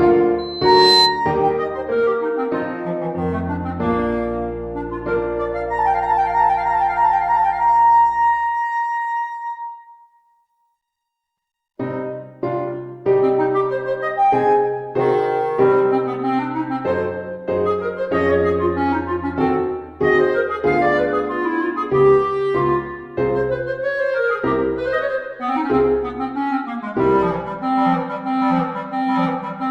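Right at the start, from 0.38 s to 1.20 s, there's a loudspeaker feedback squeal: a single tone at 4.1 kHz swells over roughly half a second to sit a few dB above the audio. The mic is hearing its own speaker, and the loop gain tops unity at that frequency.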